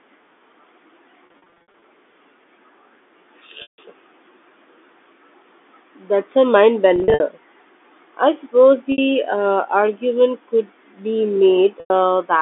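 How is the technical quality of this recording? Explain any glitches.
The recording carries five audible glitches from lost packets, heard over a telephone-band G.711 line that passes roughly 250 Hz to 3.6 kHz.

Packet loss with pitch repetition occurs at 1.26–1.82 s (280 ms lost in bursts up to 60 ms), 3.62–3.78 s, 6.96–7.20 s (bursts up to 60 ms), 8.92–8.98 s and 11.80–11.90 s. The receiver repeats the last pitch period to fill each gap, so short losses sound like a held, buzzy tone. Longer runs fade toward silence before the sound cross-fades back in.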